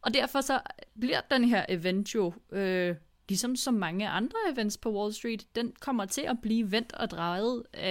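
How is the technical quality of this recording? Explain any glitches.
No glitches or technical faults can be heard here.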